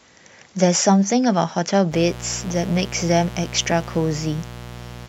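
Mains buzz enters this speech recording at 1.89 s and runs to the end, a raspy 60 Hz harmonic buzz from leaking switching spikes, roughly 15 dB below the speech.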